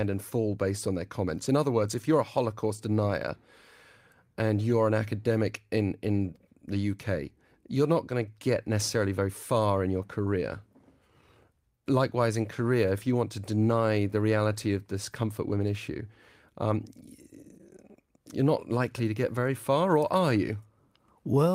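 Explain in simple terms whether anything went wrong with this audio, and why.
Nothing went wrong with this audio, because no faults can be heard anywhere in it.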